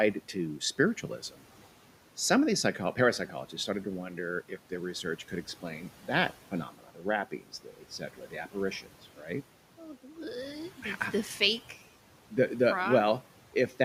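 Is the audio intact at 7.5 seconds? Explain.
No. Between 5.04 and 9.28 s, just after "to wonder if their", the noise suppressor misreads parts of the speech as background and turns them down along with the room noise, which sits about 20 dB below the speech. At 7.5 s the speech falls inside that span. Soft consonants and word endings sound swallowed or faint, dipping by as much as about 12 dB. The cuts add up to roughly a second of the span.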